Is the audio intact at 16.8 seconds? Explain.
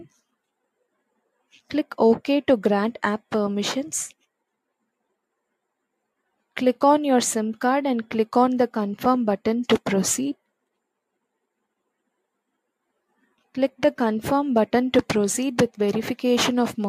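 Yes, at 16.8 seconds the audio plays through intact, with no dropout, click, distortion or other fault audible at that point.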